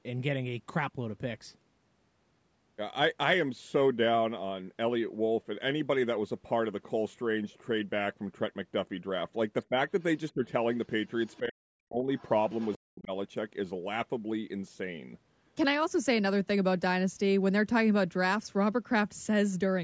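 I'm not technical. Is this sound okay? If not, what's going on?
No, there are two related problems, both packed into roughly 9.7 to 13.1 seconds of this speech.

First, speech suppressed in double talk: at 9.69 to 9.78, 10.34 to 10.43, 11.39 to 12.08 and 12.84 to 13.11 s, the talker's voice dips, briefly at first, then nearly vanishing for the last two. Likely cause: both sides spoke at once, and the call's echo control turned everything down.

Second, the other side's voice leaking through: faint scraps of a second voice at 10.28 to 10.32, 11.27 to 11.39, 12.18 to 12.29 and 12.49 to 12.78 s, getting a little louder in the last two. That's likely the far end playing on the loudspeaker and not fully removed from the microphone.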